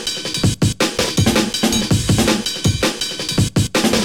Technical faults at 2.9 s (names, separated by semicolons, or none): clock slip clicks